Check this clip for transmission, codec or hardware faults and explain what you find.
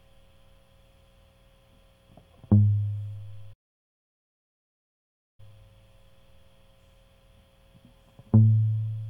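One fault stands out in the music: a playback stall. From 3.53 s to 5.40 s the sound cuts off in mid-flow for about 1.85 s, then picks up again. The player likely ran short of buffered data or had its output thread blocked. A waveform shows a flat, silent gap, and a spectrogram shows a blank vertical band across every frequency for that stretch.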